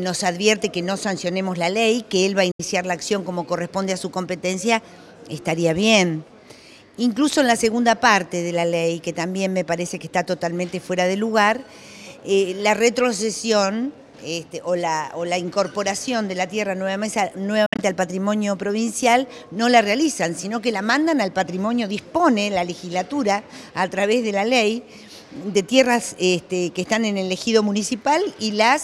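At 2.51–2.61 s the sound drops to silence, then returns as if it had kept playing. At 17.66–17.81 s there is a cluster of short holes, the longest about 61 ms. Both are likely a Bluetooth dropout, with packets reaching the headphones too late and being discarded.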